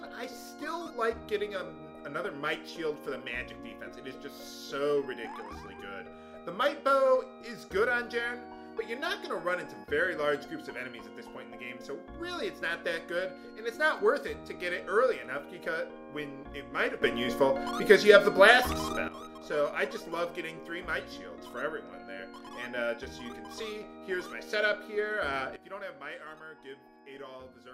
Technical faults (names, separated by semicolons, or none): sudden gain jump